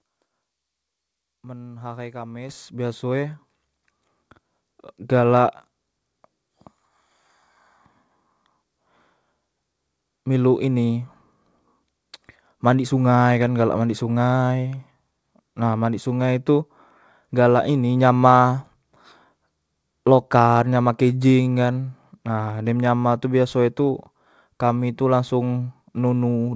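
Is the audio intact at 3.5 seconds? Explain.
No. At 3.51 s the microphone volume is stepped up: the call software judged the input too quiet and raised the device's input gain by about 5 dB in a single step, so the speech and the background noise both jump louder at once.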